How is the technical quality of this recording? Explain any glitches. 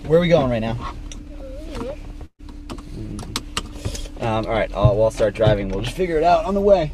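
One glitch stands out: a burst of packet loss from 2.25 to 2.41 s. Several consecutive packets went missing or arrived too late to play, so the receiver covered the hole by extending the last sound it had, for about 132 ms, and turning it down as the gap went on. That patch fades into roughly 70 ms of silence before the audio resumes. About 140 ms of the original sound is simply gone, so the sound jumps ahead at the restart.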